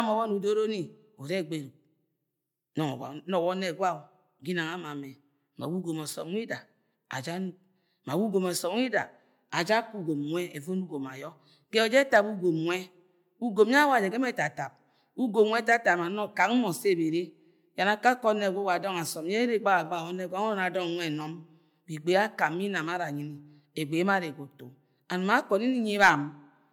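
Speech that has most likely suffered generation loss, decoded and re-encoded through MP3 about five times, each pass requantising on a shifted frame grid. Throughout, the sound is swirly, smeared and hollow, with blurred attacks, worse than a single pass at 128 kbit/s would give.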